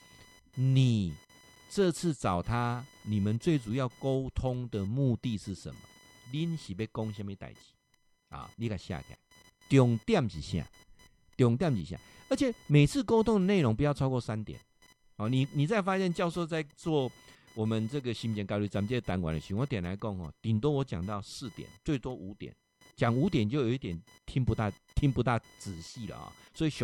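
Computer activity noise runs throughout: a chirping buzz near 1 kHz, roughly 30 dB under the speech, tracking processor load on the shared ground rather than mains hum's steady pitch.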